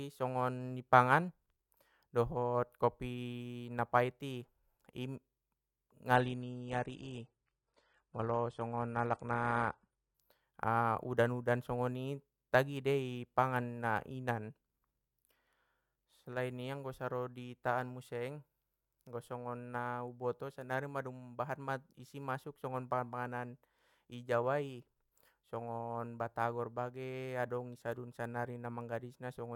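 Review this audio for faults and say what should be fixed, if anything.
Adaptive stream at a lower bitrate, 6.15 to 10.15 s: the speech abruptly loses everything above 9.8 kHz and gains codec smearing without any gap, which fits a switch down to roughly 32 kbit/s. To prevent it, give the player a larger buffer or a steadier connection so it never has to step down to a low-bitrate rendition.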